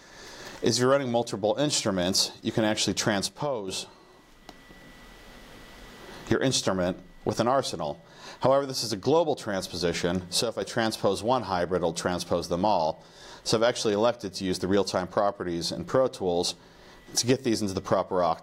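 The level falls abruptly by about 6 dB from 3.26 to 3.68 s and again from 10.42 to 10.62 s, with nothing else changing. The likely cause is one channel drops out, briefly losing one of two identical channels before the mono sum.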